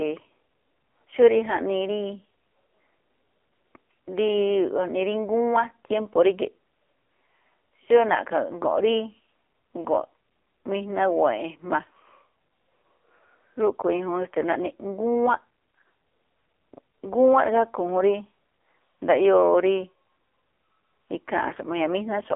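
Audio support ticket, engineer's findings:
AMR narrowband mobile codec, full clip. Speech band-limited to a telephone line, roughly 300 Hz to 3.4 kHz, with no content above 3.7 kHz. Heavy codec damage: buzzy, synthetic voicing. Sound points to a low AMR-NB mode near 5.9 kbps. Probable component: mobile network leg. Mechanism: 8 kHz narrowband coding, vocal-tract model with sparse pulse excitation starved of bits.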